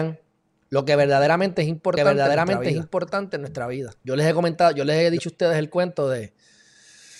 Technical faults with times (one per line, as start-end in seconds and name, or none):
1.97-5.19 doubled audio track